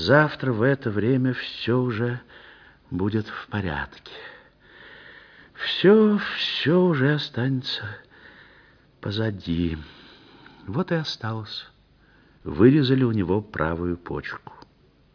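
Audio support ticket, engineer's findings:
No faults found in the audio; nothing to attribute to any component.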